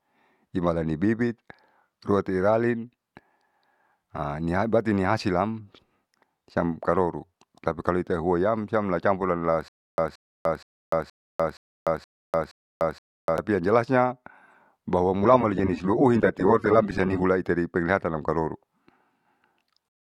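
Speech, carrying two playback faults. From 9.68 s to 13.38 s there is a stutter with silent gaps: a 174 ms fragment of sound repeats eight times at a steady 472 ms period, each repeat followed by about 297 ms of digital silence. The likely cause is a stalled player or stream that replays its last buffered chunk on every retry and then runs dry, so whatever audio belonged in that window is lost. From 15.23 s to 17.23 s codec artefacts rise. The change arrives abruptly and without any gap, which marks an adaptive stream at a lower bitrate. The player dropped to a cheaper rendition while the connection slowed, and the degradation points to a fall from roughly 96 kbit/s AAC to around 32 kbit/s before quality returns.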